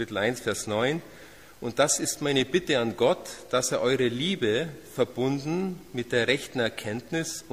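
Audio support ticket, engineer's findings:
No faults found on listening; nothing here needs chasing, so the ticket can be closed from the audio side.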